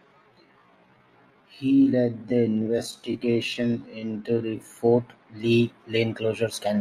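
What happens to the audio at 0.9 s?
At 0.9 s the speech is inside a time-stretched section running from 0.00 to 4.76 s. Software likely slowed this span to 0.63 times normal speed, repeating short slices to hold pitch, so the speech drags at unchanged pitch.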